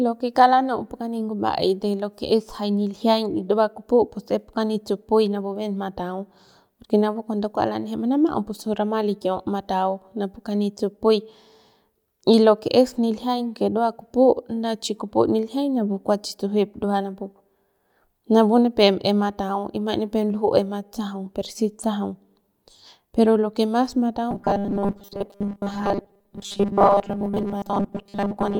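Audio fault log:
24.31–28.59 s: robotic sound from repeated short buffers. The speech turns into a rigid 200 Hz metallic buzz, likely from about 5 ms chunks looping while most real audio gets skipped.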